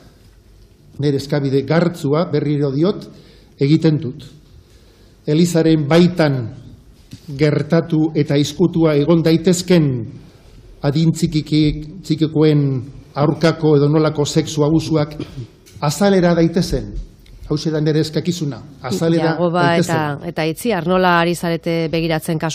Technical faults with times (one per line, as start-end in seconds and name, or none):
none